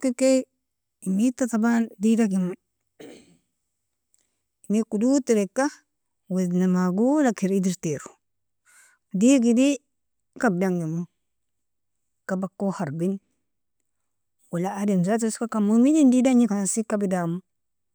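Speech recording with no technical faults to report at any point.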